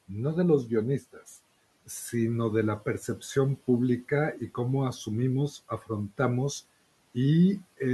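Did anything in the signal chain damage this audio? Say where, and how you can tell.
Yes. The call-processing stage did the damage: the speech was cut by the noise suppressor between 5.69 and 5.9 s. In that span, roughly a tenth of a second of speech is pulled down by as much as about 14 dB, so it sounds swallowed and faint. The suppressor mistook that stretch of speech for noise and attenuated it along with the background. Network loss would leave a hard gap or glitch. This is a partial dip, even though the room noise sits about 26 dB below the speech.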